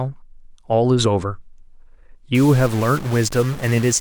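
A speech recording in which, from 2.35 s to the end at 4.01 s, a single data bit is likely stuck at a fixed value through a broken line or converter fault. Roughly half the samples jump by a step near -30 dBFS, giving the speech a harsh, buzzy distortion. Because that bit flips with the sign of small values, the pauses fill with steady noise at about that level.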